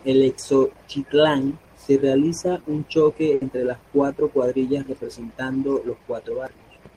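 Speech, with a burst of packet loss from 3.34 to 3.42 s. The last sound is stretched and fades for 70 ms. Then 70 ms of speech is missing.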